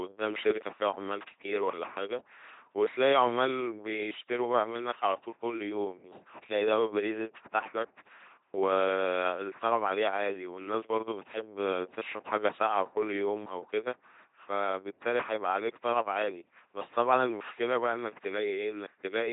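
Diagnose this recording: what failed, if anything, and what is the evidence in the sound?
The codec is the culprit here: the speech has the buzzy, mechanical robot quality of an LPC-10 vocoder the whole way through, heavily mangled, with nothing above 3.8 kHz. Each moment gets rebuilt from a pulse train or noise through a short vocal-tract filter, which fits a 2.4 kbit/s coder.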